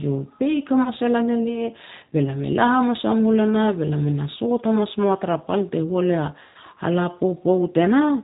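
Throughout this speech clip the audio sounds slightly rough and synthetic, with nothing above 4 kHz. That is the G.729 codec damage, plainly audible here and consistent with an 8 kbit/s stream, as the decoder rebuilds the voice from a filter, a pitch predictor and a few pulses per frame. At 0.84 to 0.89 s, just before "e lan elia be", the sound briefly stretches into a buzzy tone or coloured noise that fades. A second, longer stretch at 6.43 to 6.56 s lasts long enough to leave the voice weak and distorted. Both are VoIP packet loss concealed by the speech codec. The decoder extrapolates from its last pitch and filter, covering about 20 ms in the first gap, which fits one lost packet, and about 120 ms in the second, which points to several consecutive losses.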